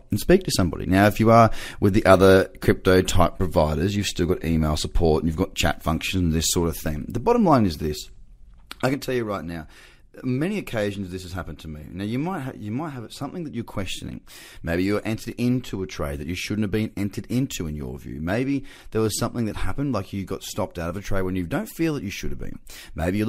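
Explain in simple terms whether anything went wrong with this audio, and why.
At 8.94 s, speech and background suddenly drop quieter together and stay there: a sudden gain jump, likely a volume change applied without a fade.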